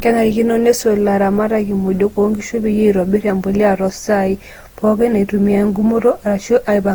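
Generation loss runs throughout: swirly, hollow, smeared speech with blurred attacks, likely from about seven repeated lossy encodes, which fits a chain of Opus passes near 48 kbit/s.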